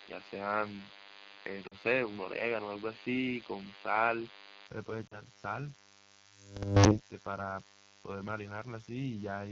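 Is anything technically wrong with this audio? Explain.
Yes, four faults are audible in this speech.

DECT cordless phone buzz, throughout: a nearby DECT handset or base sends a radio burst every 10 ms, which the audio circuit rectifies into a thin, steady 100 Hz buzz full of harmonics, about 20 dB below the speech.

AMR wideband (HD Voice) codec, throughout: the speech is plainly rough and raspy, which points to one of the two lowest AMR-WB rates, around 8.85 kbit/s, where the pulse-driven vocal tract model struggles.

Input switched to a poorer device, from the start to 4.67 s: the sound is dull, with nothing above 5 kHz, a new noise floor roughly 30 dB down and a level shift of a few dB. It clears abruptly, with no gap, most likely because the input changed back from a lesser microphone or headset profile.

Lost AMR speech frames, 1.67 to 1.75 s and 5.07 to 5.21 s: about 40 ms of speech is missing each time, which fits two 20 ms frames failing their checksum. 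The decoder stretches the last pitch with falling gain, so the sound smears briefly and dips before recovering rough.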